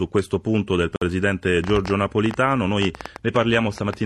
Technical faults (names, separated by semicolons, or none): gap between stream segments; train of clicks